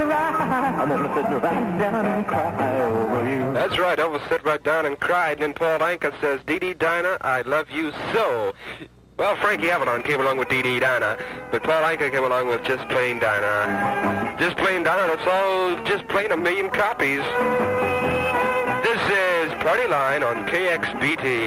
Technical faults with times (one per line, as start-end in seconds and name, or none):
none